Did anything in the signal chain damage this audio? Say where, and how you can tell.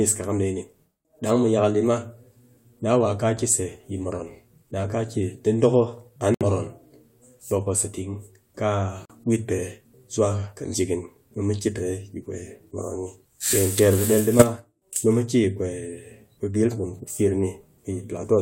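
Yes. The damage happened in the codec stage, somewhere between encoding and decoding, in storage or transmission. There are two kinds of fault in this speech clip.

Corrupt frame muted: the speech drops abruptly to silence from 6.34 to 6.42 s and again from 9.05 to 9.11 s, just before "wit pe". The holes last 80 ms and 56 ms, lengths that point to three and two whole frames. They start on a hard edge with no fade, and the speech resumes on schedule. That pattern fits a decoder rejecting frames whose bits were flipped, with the player inserting silence in their place.

Corrupt frame decoded: from 14.39 to 14.43 s, just before "nu mu", a short, loud glitch, peaking at about -5 dBFS, cuts across the speech. It lasts roughly one frame. Here the damaged frame was not rejected. The decoder played it, and the corrupted gains and spectral codes put strong energy at the wrong frequencies.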